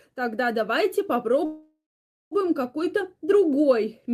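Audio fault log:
1.45–2.34 s, call audio freeze: right after "тогда давайте" the sound stalls, and the last bit gets stretched into a fading buzzy tail that drops to silence for roughly half a second, about 0.86 s of filler in all. Then it picks up exactly where it left off, with nothing lost, just pushed about 0.86 s later. That's likely packets held up in transit, so the jitter buffer ran dry and the receiver papered over the wait.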